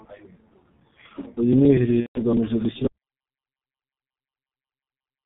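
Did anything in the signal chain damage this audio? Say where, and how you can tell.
Yes. The damage is at the codec stage, and it runs through the whole clip. The speech is heavily coded with G.723.1 at 6.3 kbit/s. Nothing comes through above 4 kHz. The voice sounds muffled and hoarse. Consonants smear because the coarse 30 ms frames blur fast changes.

The network stage adds VoIP packet loss concealed by the speech codec, from 2.00 to 2.21 s. About 150 ms of audio is missing, which fits five lost 30 ms frames. The decoder repeats its last pitch and filter. The gap is stretched into a fading tone or noise, muted from the third lost frame, and the speech stays weak just after.

At 2.87 s the audio drops out to silence and stays silent to the end. The gap is silent with no room tone, so the input vanished rather than the talker pausing. A disconnected device or a lost link upstream of the recorder is the likely cause.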